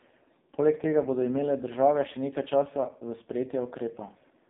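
From start to finish, the speech passes through an AMR narrowband mobile codec. Its 8 kHz sampling leaves nothing above about 3.8 kHz, and the line band runs from 150 Hz to 3.7 kHz. The codec rebuilds the voice from a vocal-tract model fed by a few pulses in each short sub-frame. Here the damage is heavy, so the voice sounds buzzy and synthetic. That points to one of the lowest AMR-NB modes, around 5.15 kbps.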